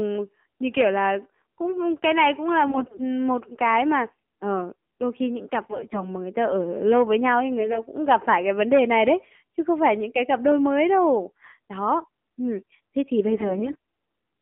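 Throughout, the speech carries the AMR narrowband mobile codec sound: nothing outside roughly 200 Hz to 3.4 kHz, and a buzzy, synthetic edge from a vocal-tract model with too few pulses, which points to a low rate near 7.4 kbps. Unlike plain band-limiting, the tone itself sounds modelled. AMR bit errors follow at 2.68–3.03 s, at 5.70–6.09 s between "đôi khi những cặp" and "mà người ta ở", at 7.58–7.81 s between "lâu với nhau ấy" and "cũng gặp phải cái", and at 13.28–13.76 s after "ừm thế thì". Flipped bits misplace the driving pulses, so the sound turns hoarse and gargly while pitch and level hold, unlike a dropout or concealed loss.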